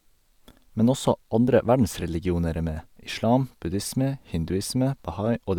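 A speech recording with no technical faults to report.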